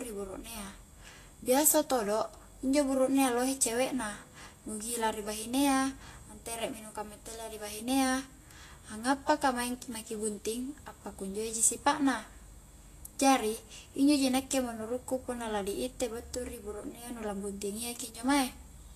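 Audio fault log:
throughout Vorbis compression: a low-quality Vorbis encode, in keeping with a bitrate near 33 kbps, is the likely cause. Nothing survives above 14.2 kHz, and the coarsely quantised treble turns fine detail into noise, leaving the speech plainly hissy and grainy with blurred attacks.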